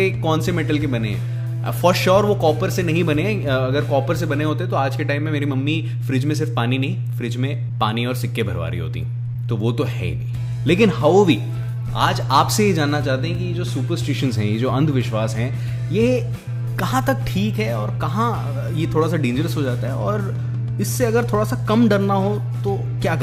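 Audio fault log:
No faults found in this audio.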